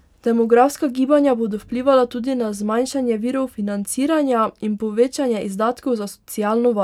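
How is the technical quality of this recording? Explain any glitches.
No technical glitches turn up anywhere in this speech recording. Nothing in it calls for an explanation.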